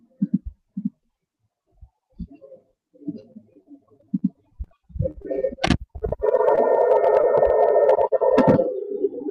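From 3.21 to 5.26 s and again from 5.93 to 6.59 s, repeated packet loss (robotic sound) leaves gaps of up to about 30 ms in quick succession. Each is patched by continuing the last sound, giving a choppy texture with pieces missing rather than one isolated glitch. At 7.21 to 7.25 s, a single short concealed packet loss fills a 20 ms hole. It is heard as a brief smear or wobble, not a sustained robotic stretch.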